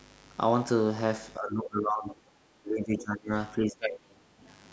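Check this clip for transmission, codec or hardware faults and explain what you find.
Two faults are audible in this speech clip. A steady, raspy mains buzz runs through the whole clip, about 30 dB below the speech. Switching spikes twice in every 50 Hz cycle put a dense series of harmonics into the signal.

Between 1.37 and 2.28 s, 2.57 and 3.33 s, and 3.58 and 4.28 s, the voice sinks, falling by roughly 20, 25 and then 30 dB. This is likely speech suppressed in double talk: an echo canceller, with both sides talking at once, turned the near talker down along with the echo. The call's microphone processing leaves nothing above 8 kHz, which is expected.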